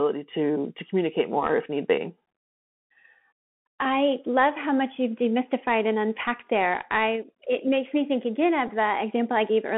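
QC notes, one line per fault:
throughout: Bluetooth CVSD headset codec. The link carries audio as a one-bit up/down stream at 64 kHz with an adapting step, limiting the band to roughly 150 Hz to 3.4 kHz. Loud high sounds outrun the step, so s sounds turn scratchy over a granular hiss.
8.67 s: Bluetooth headset packet repeated. Just after "makes me think again", about 11.2 ms of audio went missing and the chip replayed earlier packet bits in its place, which fits three lost packets. The brief run of repeats every 3.75 ms is heard as a buzz near 267 Hz in the speech.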